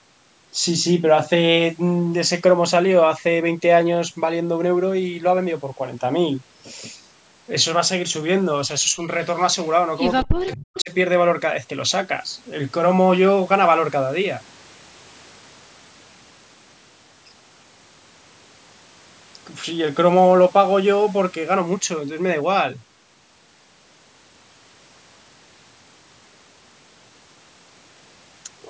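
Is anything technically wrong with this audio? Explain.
Yes. The speech carries two related call-path faults, both packed into the stretch between about 9.6 and 10.9 s.

Echo leak appears as three short bursts, at 9.63–9.69 s, 10.50–10.56 s and 10.78–10.83 s, each only around 50–60 ms long. Each burst is a faint delayed copy of the speech, trailing it by 221 ms. The level rises from about 35 dB below the speech in the first burst to about 25 dB and then about 20 dB below in the later two. The likely cause is a loudspeaker-side echo canceller that failed to remove its microphone's pickup of the far-end audio, so scraps of it were sent back.

Speech suppressed in double talk runs from 10.25 to 10.91 s and takes out roughly half a second in total. The speech dips sharply, at its deepest by around 40 dB, so parts of it drop almost to nothing. This is likely the echo canceller reacting to simultaneous talk at both ends: it could not separate the local talker from the returning echo and attenuated both. 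The two echo bursts at 10.50 s and 10.78 s fall inside this window.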